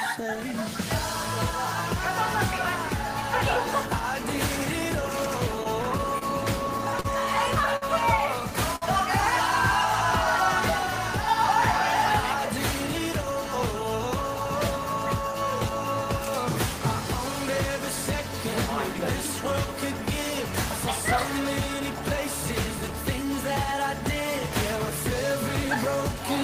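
Between 5.63 and 8.84 s, the stream suffers scattered short gaps: around ten packets went missing or arrived too late, spread across the stretch, and the receiver bridged each hole by extending the sound that came just before it. Together these patches fill roughly 200 ms, about 7 percent of the span, and the longest is around 50 ms. The audio stays clear but is dotted with brief ticks, small smears and momentary hiccups.

From 13.34 to 17.80 s comes a jitter buffer speed-up. Too much audio had built up in the buffer, so the receiver trimmed tiny slices, each one or a few pitch periods long, over and over to pull the delay back down. Roughly 50 ms disappears in total, so playback runs at about 101 percent speed with the pitch unchanged. The change is too small to sound hurried.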